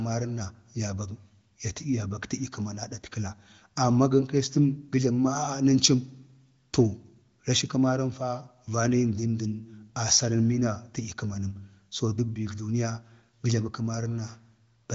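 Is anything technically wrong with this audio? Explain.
No, nothing is technically wrong with this audio.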